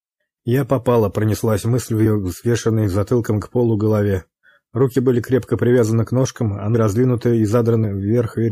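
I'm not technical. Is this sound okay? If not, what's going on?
No. Compressed frames skipped at 6.74 s and 7.83 s: whole blocks of the file weren't played, so the sound jumps ahead, about a fifth of a second, then a shorter bit.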